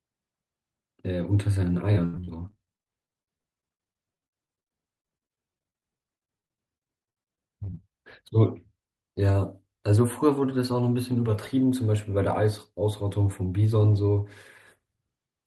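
From 1.95 to 7.91 s, repeated packet loss chops the speech into robotic fragments: dozens of gaps, up to 82 ms each, patched by stretching the last sound, unlike clean single dropouts.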